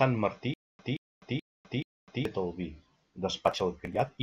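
From 0.54 s to 2.25 s the speech falls into a stutter with silent gaps: a 175 ms fragment plays, drops into about 254 ms of dead digital silence, then the same fragment returns, four times in all at a steady 429 ms period. The likely cause is a stalled player or stream re-serving its last buffered chunk at each retry before running dry. Whatever speech belonged in that span is gone, and normal playback resumes with "el vi".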